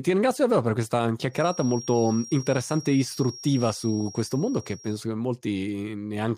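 A speech recording with a feedback whistle. Just after "ringrazio davvero per questa", at 1.28 s, a thin steady tone near 5.6 kHz appears. It sits roughly 20 dB below the voice, swells and fades slowly, and lasts until 5.05 s. The likely cause is a loudspeaker-to-microphone loop hovering at the edge of feedback.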